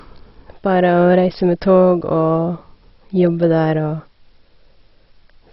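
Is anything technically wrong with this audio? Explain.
Yes. Throughout the speech there is heavy damage consistent with MP2 compression at a starved bitrate, likely MPEG Layer II running at something around 32 kbps. With so few bits to share among its 32 sub-bands, the encoder has switched off everything above about 5.6 kHz and quantised the remaining bands coarsely, with bands dropping in and out. The result is a dull, band-limited sound carrying a gurgling, granular distortion typical of low-rate digital radio.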